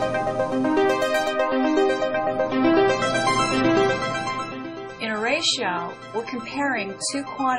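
Adaptive stream at a lower bitrate, from 1.46 s to the end of the clip. The player switches abruptly to a much leaner encoding of the same stream, likely because the connection slowed, and there is no gap at the change. Everything above 10.5 kHz vanishes, the top end turns dull, and compression artefacts thicken. The sound is consistent with a drop from around 128 kbit/s MP3 to roughly 24 kbit/s.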